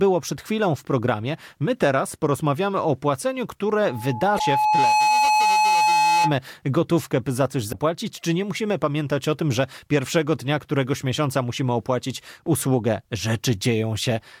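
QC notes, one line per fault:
3.82–6.37 s, loudspeaker feedback squeal: after "teraz porozmawiamy o płaceniu", an 853 Hz tone swells over about a second and a half to roughly 5 dB above the speech. The microphone is re-amplifying its own loudspeaker at that frequency. It stops before "gotówkę by za coś".
4.36–4.41 s, 7.69–7.74 s and 13.64 s, damaged data in a compressed stream: brief glitches occur where the decoder misreads corrupted frames and resyncs. The second falls between "gotówkę by za coś" and "czy nie musimy pamiętać".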